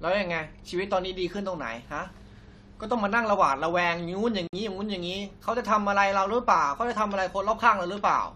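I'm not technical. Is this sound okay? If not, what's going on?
No. At about 4.47 s the speech stops dead for about 57 ms, then picks up exactly where it left off. This is a gap at a join of encoded pieces: two separately made chunks were stuck together with their built-in silent padding left in. Unlike a dropout, nothing is lost.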